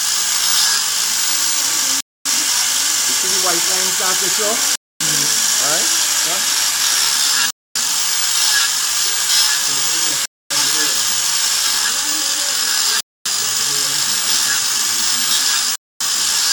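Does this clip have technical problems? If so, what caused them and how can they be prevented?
Yes. Hard-edged 250 ms silences break the sound at 2.01, 4.76, 7.51, 10.26, 13.01 and 15.76 s: a gap between chunks, where silence is inserted after every 2.5 s block. To prevent it, buffer and schedule each chunk to start exactly when the previous one ends, trimming any codec padding.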